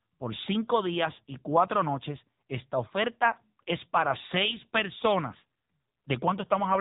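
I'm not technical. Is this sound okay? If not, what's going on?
No. The whole recording, from start to finish, has been squeezed through an AMR narrowband mobile codec, the kind old mobile phone networks use. It keeps only the low part of the sound, cutting off everything above about 3.8 kHz, so the speech sounds muffled and boxy. It also rebuilds the voice from a simplified model, with little data to work with. That is why the speech sounds plainly buzzy and somewhat artificial, like a poor phone call.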